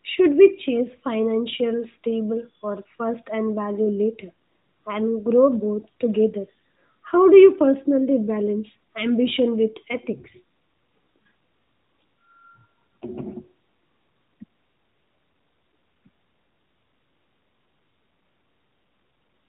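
Nothing is technically wrong with this speech recording, which carries the narrow, band-limited sound of a call over the AMR narrowband mobile codec, working as it should.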